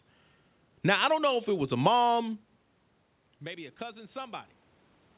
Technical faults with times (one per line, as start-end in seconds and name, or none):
3.40-4.52 automatic gain rising